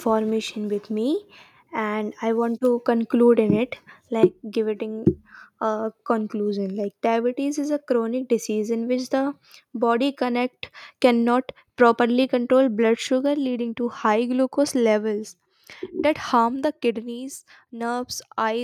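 At 4.23 to 4.25 s there is a brief microphone overload. The loudest peak slams into the converter's limit and its top is flattened. Roughly a tenth of the samples there are cut off. It sounds like a sharp, harsh crackle. The likely cause is input gain set too high.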